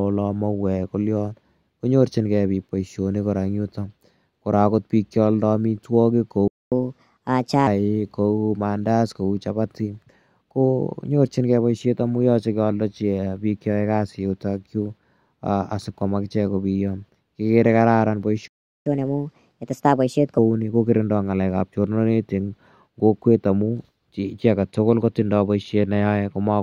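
Playback stall at 6.48 to 6.72 s, just after "piik cha aldai amitwogik": the speech cuts to silence for about 240 ms, likely because the player ran short of data. Catch-up at higher speed follows from 6.72 to 7.67 s: the backlog plays 1.25 times fast, pitch raised about four semitones, before settling. A second playback stall at 18.48 to 18.86 s silences the speech for about 380 ms. Another catch-up at higher speed runs from 18.86 to 20.38 s, again at 1.25 times speed and about four semitones sharp, returning to normal just before "ni kokirindai".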